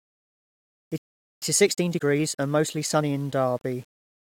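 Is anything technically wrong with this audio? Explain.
Yes, there are three faults.

Low bit depth without dither runs through the whole speech clip. A grainy, signal-following distortion sits about 35 dB below the speech and roughens the quiet stretches. It fits 8-bit rounding with no dither, which is likely the cause.

A playback stall occurs from 0.98 to 1.42 s. The speech cuts off in mid-flow and leaves about 0.44 s of silence. It then resumes. This is likely because the player ran out of data or its thread was blocked until it recovered.

Time-compressed catch-up follows from 1.42 to 3.16 s. The player works off its backlog by removing small slices and cross-fading across the joins. The speech runs about 1.25 times faster at normal pitch.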